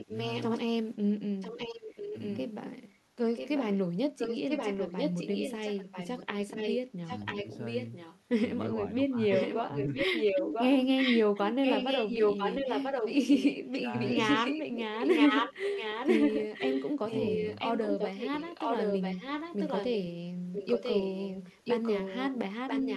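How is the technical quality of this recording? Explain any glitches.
The recording has clear technical problems. An echo runs through most of it, and there are several short spots where speech drops out.

Echo leak is present from 0.0 to 8.2 s and again from 9.3 s to the end. A delayed copy of the speech trails the original by 0.99 s. It sits a few dB under the speech in the first stretch and is about as loud as the speech in the second. That's most likely a far-end speakerphone whose echo canceller isn't removing what its mic picks up, so the sound gets sent straight back.

Speech suppressed in double talk shows up at 0.04–0.12, 1.54–2.15, 6.89–7.47, 8.73–10.11, 13.53–13.95 and 17.0–17.42 s. The level dips while the echo overlaps the talker. The dips are around 5 to 15 dB in most spots, about 25 dB at 13.5 s, and about 35 dB at 6.9 s, where the speech nearly vanishes. The likely cause is the canceller failing to tell the talker from the returning echo and turning both down.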